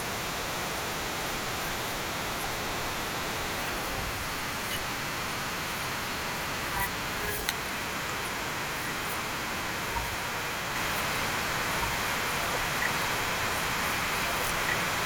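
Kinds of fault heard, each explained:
Doubled audio track: from 10.76 s to the end, a second full-band copy, about as loud, trails two seconds behind and enters abruptly, likely from a duplicate capture path.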